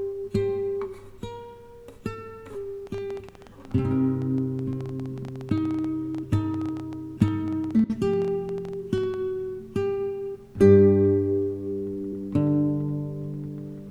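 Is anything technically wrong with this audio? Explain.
Yes. A train of clicks runs from 2.87 s to 9.15 s. Sharp, similar pulses arrive at about 9.6 per second, but the spacing is irregular, so it never settles into a steady tick. There are around seventy of them, peaking at roughly the level of the sound itself. They sit on top of the audio and through the pauses. The likely cause is interference from nearby equipment or a faulty connection or power supply.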